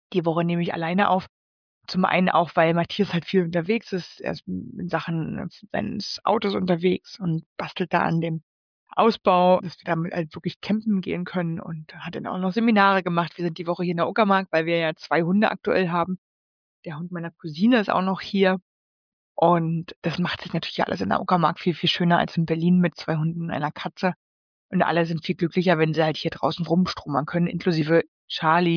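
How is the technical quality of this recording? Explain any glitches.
Nothing here trips me up: I don't hear a single glitch anywhere in the recording, so there's nothing to explain.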